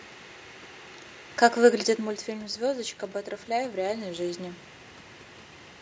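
A speech recording in which automatic gain rising occurs: after the input fell by about 9 dB, the gain control raised its level by about 4 dB from 3.45 to 4.34 s, so voice and room noise swell together.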